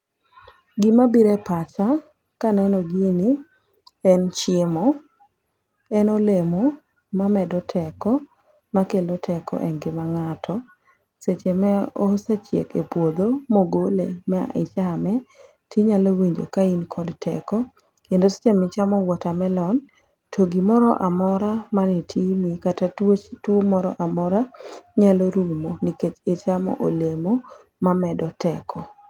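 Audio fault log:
No faults detected.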